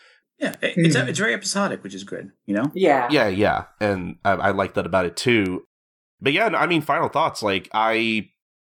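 Speech, with word clock ticks from 0.54 s to 8.27 s: about ten sharp clicks roughly every 0.7 s, each a one-sample slip as an unlocked receiver's clock drifts against the sender's by around 30 ppm. A spectrogram shows evenly spaced thin vertical lines; the waveform shows single-sample spikes.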